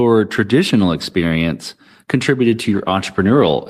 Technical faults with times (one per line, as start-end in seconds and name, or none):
2.67-3.69 call bitrate drop